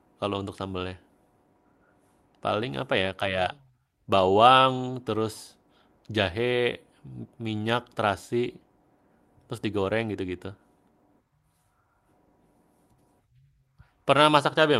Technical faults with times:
none

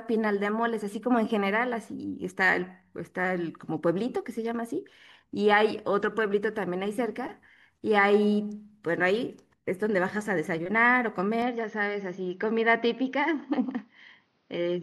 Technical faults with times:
11.42-14.83 input switched to a poorer device

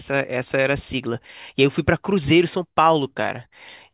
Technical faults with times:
none

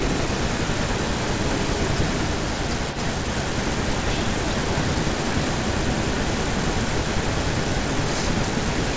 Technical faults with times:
0.00-8.96 echo leak

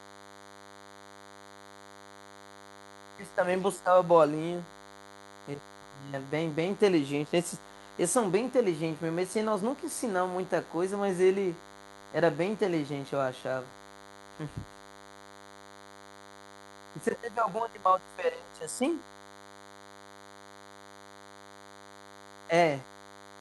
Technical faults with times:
0.00-23.40 DECT cordless phone buzz

